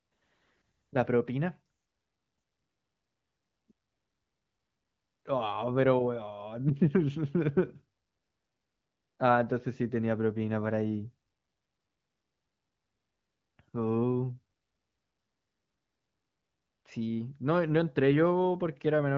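No technical faults can be heard in this speech, which has come through the AMR wideband (HD Voice) codec with only light coding damage and nothing above 7.5 kHz.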